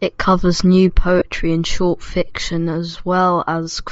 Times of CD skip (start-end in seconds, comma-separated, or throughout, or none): none